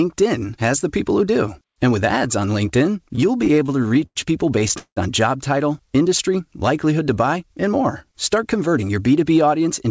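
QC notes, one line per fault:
3.04–4.17 s and 4.59–4.98 s, repeated stalls (stutter): late packets drained the jitter buffer repeatedly, 19 times then 4 times, just before "on job title industry". The receiver stretched the last sound, fading it in the longest wait of 180 ms. Nothing is lost, but the sound drags and judders.
7.36–9.24 s, jitter buffer speed-up: after "title industry likelihood to", the receiver trimmed excess buffered audio by cutting out short pitch-period pieces, around 150 ms in total. Playback runs at 107% with pitch unchanged, so this stretch sounds hurried through the G.722 path's 8 kHz band limit.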